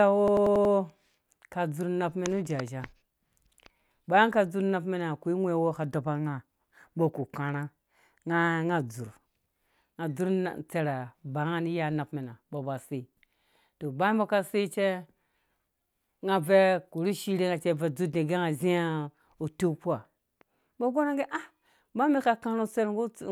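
A system hang loop runs from 0.28 to 0.74 s. The playback system stalled while the hardware kept replaying one 92.9 ms slice of speech, which fits a 4096-sample buffer. It repeats five times at 10.8 Hz, a rapid machine-gun stutter.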